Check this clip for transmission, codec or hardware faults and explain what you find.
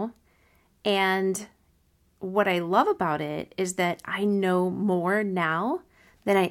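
No fault is evident: the speech signal is continuous and intact throughout.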